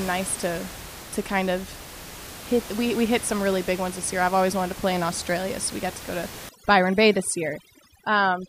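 From 6.49 s to the end, overdone noise removal kicks in: bands near the noise estimate get gated hard, leaving twinkly specks behind.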